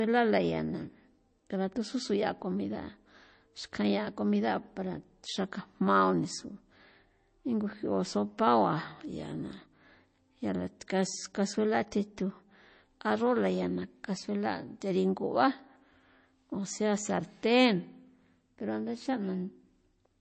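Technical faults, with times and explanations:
Throughout: MP3 compression, likely from encoding at a very low bitrate in the region of 32 kbps. Starved of bits, the encoder drops everything above about 8.3 kHz, so the speech loses its top-end air and s sounds go dull. Weak frequency lines also flicker in and out between frames, which gives the speech a plainly audible watery, swirling texture with metallic chirps on sibilants and smeared consonant attacks.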